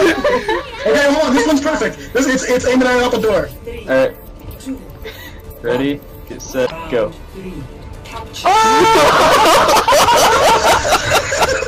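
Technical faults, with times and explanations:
Throughout: hard clipping. The signal is driven about 14 dB past what the chain can carry, so every peak is sheared off at the same ceiling. Roughly one sample in seven sits pinned at the limit, which is why loud passages carry a constant harsh fuzz rather than occasional crackle. On a waveform the tops and bottoms form flat plateaus against the rails. On a spectrogram, dense harmonic energy smears upward into the high kHz range on every loud moment.
6.62 to 6.72 s: damaged data in a compressed stream. For about 0.1 s the decoder meets corrupted frames, misreads them, and hunts for the next valid header before locking back on. This produces a short chirp, squawk, click or hole. On a spectrogram it appears as a brief disturbance with an abrupt edge on each side. The waveform shows a sudden discontinuity instead of a smooth envelope.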